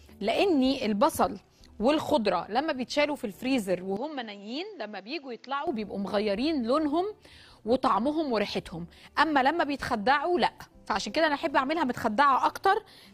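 From 3.97 to 5.67 s the audio abruptly turns duller and quieter, roughly 10 dB down, with nothing above 7.6 kHz and a faint new background noise well below the signal, then clears again. This is likely an input switched to a poorer device mid-recording.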